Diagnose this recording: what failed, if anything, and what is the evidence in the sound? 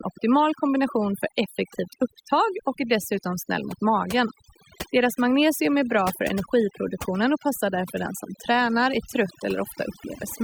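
Overdone noise removal runs through the whole speech recording, introduced at the call-processing stage by a noise suppressor set far too aggressively. Between phrases the background drops to near silence, broken by twinkling, isolated specks of tone. The suppressor cuts individual frequency bands hard whenever their level sits close to its noise estimate, so the quieter components of the voice are removed along with the noise.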